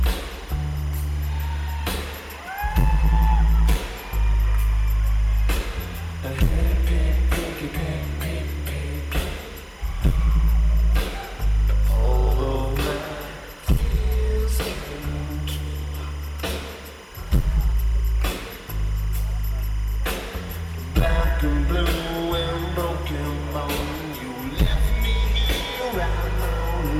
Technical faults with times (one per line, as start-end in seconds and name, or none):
0.00-26.99 timecode bleed